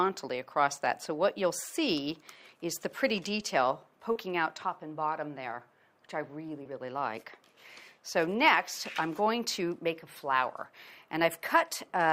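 At 4.11 to 4.17 s and 6.63 to 6.67 s there is short concealed packet loss. About 40 ms, then 20 ms, of audio arrived too late to play. The receiver extended the preceding sound to fill each gap. Both spots come across as a brief smear or wobble.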